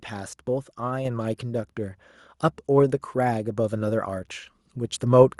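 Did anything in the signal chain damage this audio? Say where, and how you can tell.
Yes. Call processing stepped up the microphone volume at 1.05 s and 4.29 s. Voice and background jump together, by about 4 dB, then about 3 dB.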